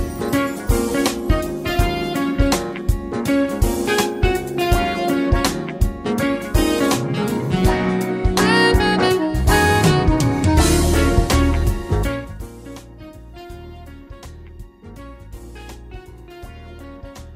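Between 11.99 and 12.50 s the level drops by around 20 dB with zipper noise. The gain falls in unsmoothed 2 dB steps, some twenty per second, each leaving a tiny click, so a ticking rides on the fade rather than the seamless slope of a smoothed fader move.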